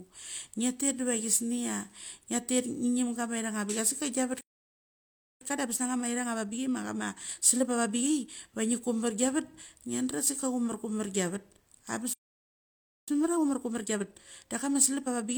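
A playback stall at 4.41 s silences the speech for about 1.0 s, likely because the player ran out of buffered data or its thread was blocked. Time-compressed catch-up follows from 5.41 to 8.41 s: the player trims its backlog by splicing out short pieces and cross-fading the joins, so the speech runs 1.25 times fast at normal pitch. A second playback stall at 12.14 s cuts the sound for about 0.94 s, likely for the same starved or blocked playback. Catch-up then runs again from 13.08 s to the end, hurried at 1.25 times.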